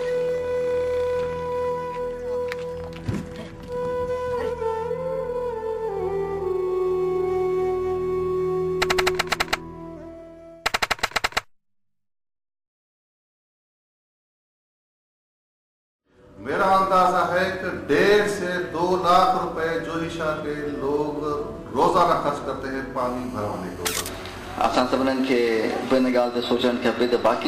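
GSM phone buzz from 22.99 to 26.11 s: a nearby 2G handset on a call pulses at 217 Hz. The audio circuit rectifies it into a raspy, harmonic-rich buzz about 27 dB below the signal.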